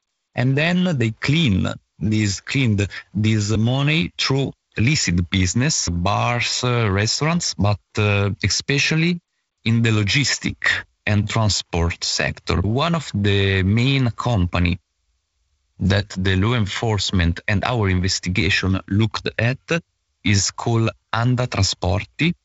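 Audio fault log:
Nothing to log here: the speech comes across as ordinary G.722 wideband telephone audio, with the lower band a touch noisy in the way a 48 kbit/s setting would give and nothing above about 7.7 kHz.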